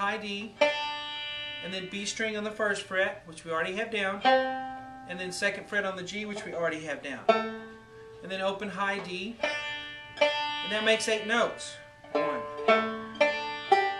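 No faults can be heard anywhere in the clip.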